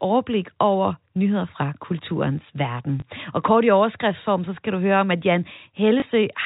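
At 3.0 s and again at 6.0 s, a single packet of this telephone-band speech was lost, and the receiver filled each 20 ms gap with packet loss concealment, repeating the last packet. Each repair is heard as a small blip.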